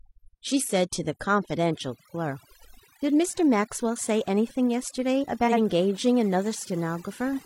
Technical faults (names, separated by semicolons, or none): overdone noise removal; frames out of order